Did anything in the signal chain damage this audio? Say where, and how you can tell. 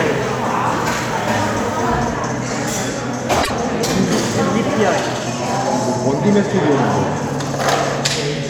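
Yes. Between 3.42 and 3.51 s there is a brief garbled flutter. This is frames out of order, arising in transport or storage before the codec decodes. Two adjacent blocks, each about 26.1 ms long (which fits single MP3-sized frames), were delivered swapped and decoded in that sequence. The halves of that short stretch play in reverse order, and no time is lost overall.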